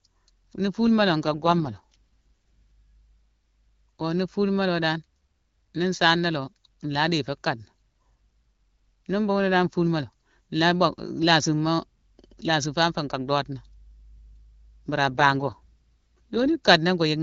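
From 1.23 to 1.94 s and 15.08 to 16.59 s, an AMR rate drop roughens the speech, consistent with 12.65 falling to 6.6 kbit/s. The band and continuity stay intact, unlike a dropout.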